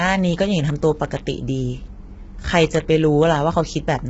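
Throughout the speech, the voice sounds rough and grainy, with a hissy wash filling the gaps between harmonics and nothing above 7.7 kHz. The likely cause is heavy low-delay AAC compression (AAC-ELD), whose short frames smear pitch detail at a starved bitrate that fits roughly 16 kbps. On a spectrogram, harmonic striations look blurred and speckled with noise, and the energy stops along a flat ceiling at 7.7 kHz.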